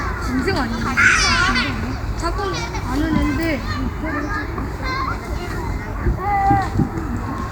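Nothing stood out on listening to this recording of sounds.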